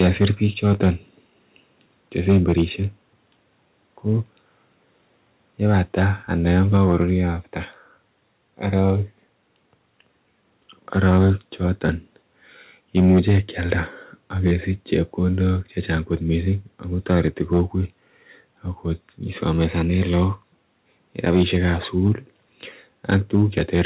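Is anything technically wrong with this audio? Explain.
Yes. Microphone overload runs from 0.0 to 2.63 s, 5.66 to 7.03 s, 8.77 to 8.9 s, 11.04 to 17.62 s, and 19.6 s to the end. The likely cause is input gain set so high that peaks overshoot the converter's ceiling by about 7, 3, 1, 8 and 5 dB respectively. Roughly 0.7 to 2 percent of samples get their tops flattened, so the loudest syllables crackle harshly.

A microphone volume step-down occurs at 0.07 s and again at 6.77 s, both inside overloaded stretches. The likely cause is the call software reacting to the clipping by cutting the device's input level in one move, about 2 dB and then about 3 dB. Voice and background abruptly sit a little quieter. The overload continues afterwards, and everything stays band-limited to 4 kHz by the telephone-style call codec.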